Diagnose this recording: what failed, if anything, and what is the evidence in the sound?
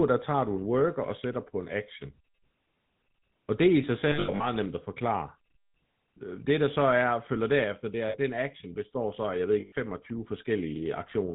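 The codec stage is the culprit throughout: the GSM full-rate codec at 13 kbps gives the speech a plainly audible buzzy, gravelly roughness with nothing above 4 kHz. It rebuilds the voice from a vocal-tract model driven by sparse, evenly spaced pulses.

On the network side there are lost GSM frames at 4.08 to 4.46 s (240 ms missing, scattered over about 320 ms, longest gap around a tenth of a second), at 8.08 s (60 ms) and at 9.60 to 9.73 s (120 ms). The decoder reuses the last good frame's settings, so each gap rings rough and metallic.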